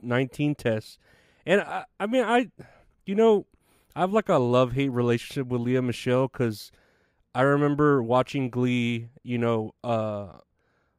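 No technical faults can be heard anywhere in the speech.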